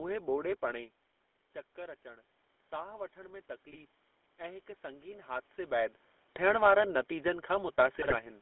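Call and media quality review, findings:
GSM full-rate codec, throughout: buzzy, gravelly roughness; spectrogram band-limited to roughly 250 Hz–3.5 kHz with a smeared harmonic structure, consistent with 13 kbps full rate.

Automatic gain rising, 1.75–5.55 s: voice and background swell together by about 6 dB; the waveform envelope and the noise floor climb gradually as the AGC raises gain.

GSM bit errors, 3.71–3.76 s and 7.94–8.17 s: squawks and gargling from corrupted decoder parameters; vertical broadband smears and level spikes on the spectrogram, with the second burst longer.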